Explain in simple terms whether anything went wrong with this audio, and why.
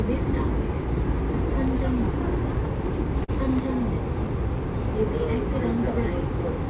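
At about 3.24 s there is a brief smear or wobble lasting roughly 40 milliseconds, ending near 3.31 s. This is short concealed packet loss. A small chunk of the call audio arrived too late to be played, so the receiver made up a stand-in by stretching the sound just before the gap, then blended back into the real audio. The whole clip also lacks sparkle, because this call path carries nothing above 4 kHz.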